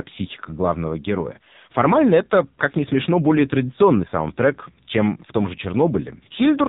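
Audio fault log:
Throughout: AMR narrowband mobile codec. The speech is band-limited with nothing above 4 kHz and has a buzzy, synthetic quality from coarse vocal-tract modelling with few excitation pulses per frame. The heavy damage fits a low-rate AMR-NB mode around 5.9 kbps.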